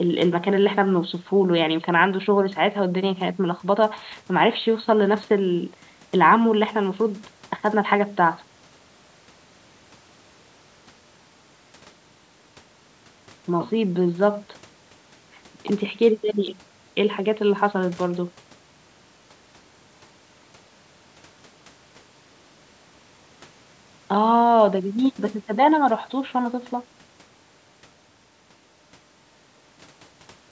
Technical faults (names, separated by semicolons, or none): none